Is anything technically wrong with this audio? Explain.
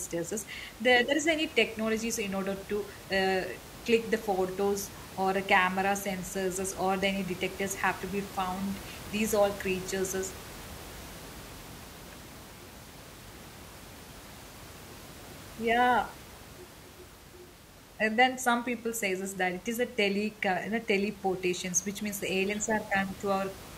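No, nothing is technically wrong with this speech recording; the only background is the ordinary noise of the room where the microphone was, sitting about 17 dB below the speech.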